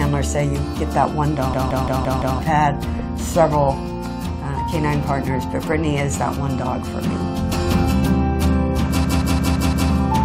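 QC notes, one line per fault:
1.54–2.39 s and 9.05–9.90 s: system hang loop. A 0.17 s chunk repeats five times at 5.86 Hz, a machine-gun stutter. The hardware kept cycling a stalled ring buffer, which fits an 8192-sample buffer. Roughly a second of sound is lost each time.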